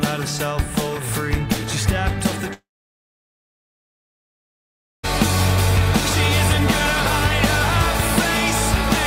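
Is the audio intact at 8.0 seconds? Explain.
Yes, at 8.0 seconds the audio plays through cleanly, with no dropout, click, distortion or other fault.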